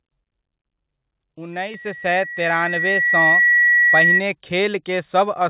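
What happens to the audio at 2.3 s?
At 2.3 s a loudspeaker feedback squeal is underway. It runs from 1.53 s to 4.24 s as a single tone near 1.9 kHz that swells over about two seconds, so at 2.3 s it is still climbing. It ends up a few decibels louder than the speech. A microphone is picking up its own loudspeaker, and at that frequency the loop gain exceeds one, so the tone keeps reinforcing itself. The tone sits below the 4 kHz band limit of the call path, so it passes through.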